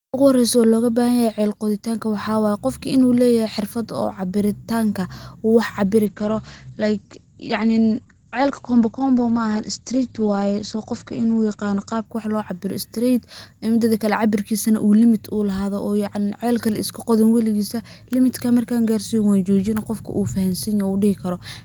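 From 6.06 to 12.11 s the speech turns rough and watery, and the top end is cut off above 8 kHz, leaving it muffled for about 5.9 s. This is a call bitrate drop: the encoder was starved of bits, consistent with a fall from roughly 32 to 11 kbps.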